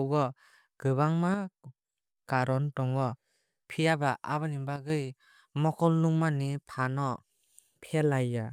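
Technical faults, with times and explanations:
1.34–1.97 s and 4.76–4.90 s, one channel drops out. In both spans the speech suddenly falls by about 6 dB and then snaps back to its earlier level. The first drop lasts about 0.63 s. The second is a brief 0.14 s dip. This is likely a stereo channel going silent for a moment. When the two sides are summed to mono, material shared by both loses half its contribution. Anything carried only on the missing side vanishes.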